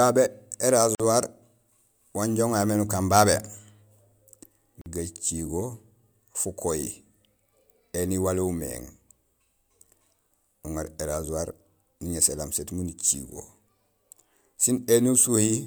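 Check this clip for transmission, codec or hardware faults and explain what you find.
Two short dropouts break the speech, from 0.95 to 1.00 s and from 4.81 to 4.86 s, each a gap of about 46 ms with softened edges before the sound resumes where it stopped. These are gaps at joins of encoded pieces: separately encoded segments were spliced untrimmed, leaving encoder start delay and end padding.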